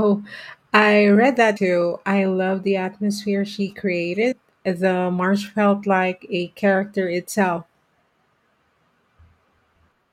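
At 1.56 s the speech lurches forward with a short smeared blip rather than a hard click, losing roughly 150 ms; a smaller jump of about 100 ms follows between 4.31 and 4.33 s. These are compressed frames skipped: whole frames, about seven and then about four, are missing or rejected by the decoder. The jump sizes fit frames of about 21 ms, and overlapping neighbours blur each join.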